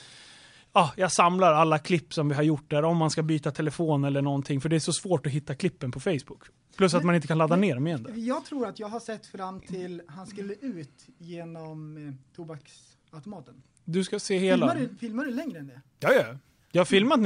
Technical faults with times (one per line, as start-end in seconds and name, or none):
15.25-16.75 imaging from sample-and-hold upsampling